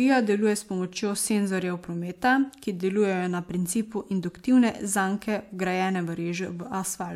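Nothing goes wrong anywhere in this bit of speech, so there's no technical fault to point to at any moment.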